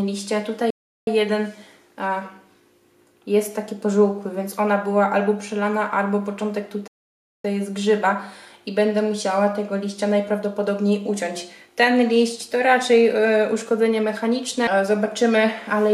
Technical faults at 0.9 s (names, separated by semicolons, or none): playback stall